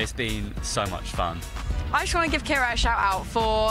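The audio is clean throughout, with nothing interrupting or disturbing it at any point.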